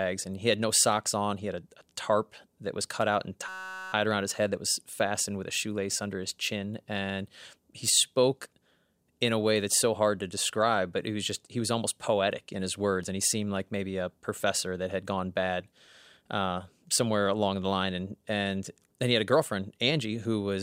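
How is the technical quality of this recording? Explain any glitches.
There is one glitch, a system hang loop from 3.48 to 3.93 s, between "was cut out and" and "around his head that". The driver stalled while the hardware kept replaying a 5.33 ms buffer, which fits a 256-sample buffer, so it sounds like a steady 188 Hz buzz, with essentially no audio lost.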